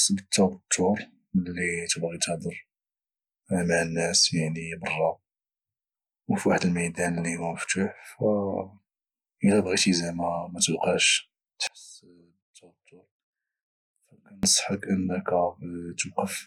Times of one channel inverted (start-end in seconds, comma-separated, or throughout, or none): 11.67-14.43